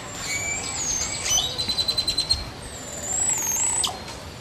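At 3.88 s, compressed frames are skipped: the sound jumps ahead by roughly 70 ms, which fits about three lost frames of 23.2 ms. Unlike a dropout, there is no silent gap.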